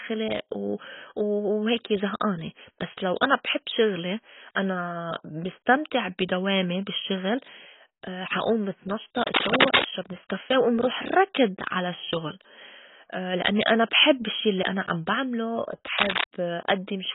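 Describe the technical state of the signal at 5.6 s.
At 5.6 s the speech carries heavy AAC compression damage, present throughout the clip. Nothing is heard above 3.8 kHz. The likely cause is AAC-LC encoding at a very low bitrate, consistent with about 16 kbps. The encoder quantises each frame's frequency lines against a hearing model. With so few bits, it pulls the cut-off down and leaves holes in the spectrum or fills bands with substitute noise. The speech sounds dull and smeared, with warbling or fizz on sibilants and sustained sounds.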